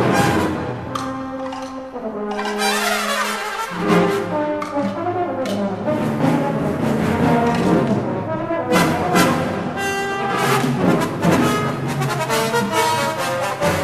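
No audible faults anywhere in the recording.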